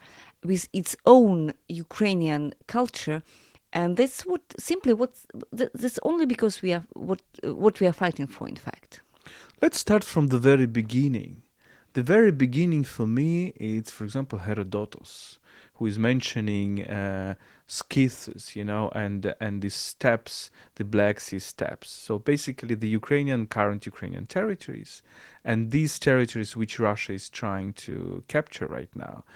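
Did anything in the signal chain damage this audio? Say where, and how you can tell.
No, nothing damaged this audio.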